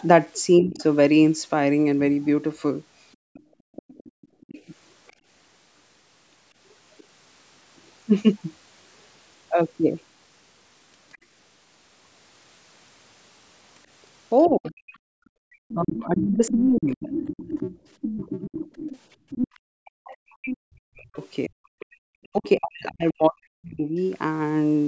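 Speech suppressed in double talk at 0.61 to 0.81 s: with both sides likely talking at once, the echo canceller pulls the talker down by roughly 15 dB for about a fifth of a second.

Other side's voice leaking through from 0.76 to 7.04 s: a faint second voice, around 25 dB under the talker, likely loudspeaker echo the canceller failed to remove from the microphone.

Background gated by the echo canceller between 3.16 and 4.41 s: the room sound drops by up to about 35 dB, about half a second in total, as the canceller clamps the microphone during loudspeaker playback.

At 3.82 to 3.87 s, a brief double-talk suppression cuts the talker by roughly 40 dB.

At 11.12 to 11.18 s, a tiny scrap of leaked far-end voice appears, around 35 dB below the talker.

From 14.44 to 22.49 s, the leakage becomes strong, only about 10 dB under the talker.

Overlapping that, from 14.47 to 23.95 s, double-talk suppression ducks the talker by as much as roughly 40 dB. 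The cuts total about 5 s.

Gating also hollows out the background at 15.01 to 15.44 s, by about 33 dB, and at 19.17 to 19.3 s, by about 18 dB.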